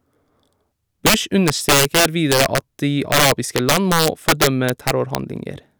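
Integer overflow runs throughout the speech: about 7 dB of overdrive pushes roughly 2 percent of samples past the integer limit, wrapping them to the opposite sign and producing violent cracks on loud syllables.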